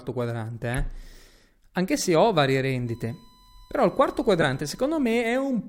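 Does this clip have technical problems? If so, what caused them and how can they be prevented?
Yes. Corrupt frame decoded faults occur twice in this speech: from 0.73 to 0.79 s, spanning a handful of codec frames and peaking around -20 dBFS, and from 4.41 to 4.43 s, a single frame reaching around -5 dBFS. Damaged bits made the decoder rebuild those frames with wrong gains and spectral codes, so energy lands at unrelated frequencies as brief chirps or noise bursts. A spectrogram shows short, sharp-edged smears that don't follow the speech harmonics, and the waveform shows a spike, especially the louder second one. Error checking with concealment, which replaces bad frames instead of playing them, prevents this.

USB whine runs from 2.87 to 4.87 s as a steady 1 kHz tone around 35 dB below the speech. The bus's 1 ms frame timing pulls current in bursts, and that ripple leaks through shared power or ground into the analogue input. 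On a spectrogram it is a thin, perfectly flat horizontal line at 1 kHz, and the waveform shows a small periodic ripple under the speech. Powering the interface separately or breaking the ground path with an isolator prevents it.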